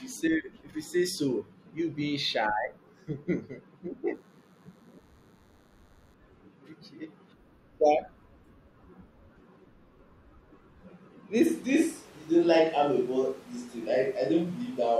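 From 4.14 to 6.14 s a faint, thin DECT cordless phone buzz sits well below the speech, a 100 Hz tone rich in harmonics from rectified radio bursts. At 11.48 s the sound abruptly turns roomy and hollow with thinner bass and more background noise, level roughly unchanged, likely a switch to a distant microphone, lasting to the end.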